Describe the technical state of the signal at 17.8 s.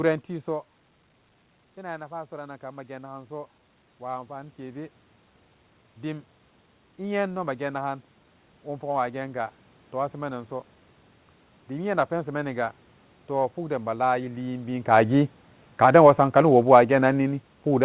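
At 17.8 s the speech and its background have sunk together: automatic gain falling, from 15.03 s to the end, as the gain control gradually lowered its gain after judging the input too loud or its background noise too strong.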